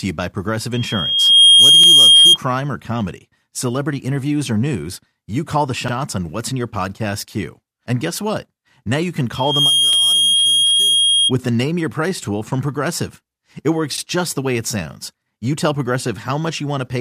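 At 0.73 s a loudspeaker feedback squeal begins: a single 3.2 kHz tone swells over roughly 0.7 s to about 15 dB above the speech and holds until 2.38 s. A microphone is picking up its own loudspeaker, and the loop gain exceeds one at that frequency. Unlike a steady interference whine, it grows on its own. Within it, at 1.84 to 1.88 s, comes the first of the overlapping chunks. Each 4 s chunk starts early, so about 48 ms replays as a brief stutter, recurring at 5.88 to 5.93 s, 9.93 to 9.98 s and 13.98 to 14.03 s. The strict 4 s spacing separates it from random dropouts. The squeal returns from 9.35 to 11.32 s, building faster, in roughly 0.4 s, and weaker, about 5 dB above the speech.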